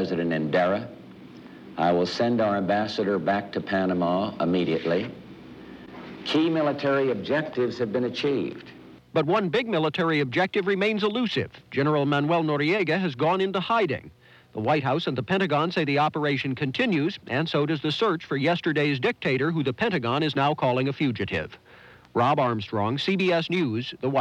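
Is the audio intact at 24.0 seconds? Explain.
Yes, the audio at 24.0 seconds plays through cleanly, with no dropout, click, distortion or other fault at that moment.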